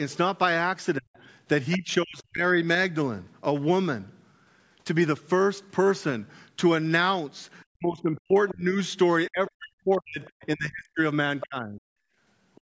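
Between 0.98 and 2.42 s the talker's speech dips and breaks up in pieces, at its deepest falling by something like 40 dB, with well under a second of speech affected in total. This is speech suppressed in double talk: with both ends talking at once, the echo canceller likely could not tell the local talker from the loudspeaker echo and turned everything down together. Inside that stretch, at 1.72 to 1.77 s, a brief scrap of a second voice comes through, around 15 dB below the speech. That is the other side's voice leaking through: the far end plays over the local loudspeaker, and the canceller likely left part of it in the microphone signal.

The longer suppression runs from 7.7 to 11.8 s, where roughly three seconds of speech in total are pulled down or cut, again by as much as about 40 dB. Inside it, the other side's voice leaks through in short fragments at 8.49 to 8.53 s (about 20 dB down), 10.25 to 10.46 s (faint, around 35 dB down) and 11.4 to 11.46 s (about 15 dB down).

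From 12.08 to 12.18 s the room background drops by about 20 dB for roughly a tenth of a second, then returns. This is background gated by the echo canceller, which clamped the microphone hard while the loudspeaker was active. A last faint scrap of leakage follows at 12.55 to 12.61 s, some 35 dB below the speech. Throughout the clip nothing is heard above 8 kHz, as expected from the call's microphone processing.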